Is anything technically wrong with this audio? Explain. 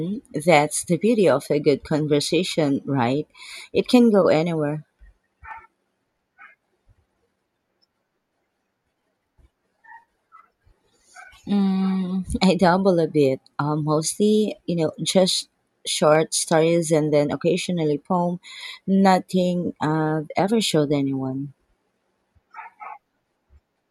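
Yes. Two sharp single clicks occur in the speech, at 5.51 s and 16.15 s. They are likely dropped samples. A handful of samples, well under a millisecond, go missing, so the waveform jumps abruptly between values. Nothing audible is lost, but each jump produces a brief click spread across the spectrum.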